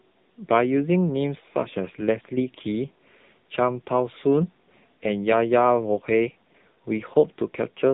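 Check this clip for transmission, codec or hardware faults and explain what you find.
The speech has passed through an AMR narrowband mobile codec for its whole length, running in a low mode whose heavy damage fits about 6.7 kbps. Few pulses per frame leave the vocal-tract model underfed, so the voice turns buzzy and synthetic, and nothing above 3.8 kHz survives.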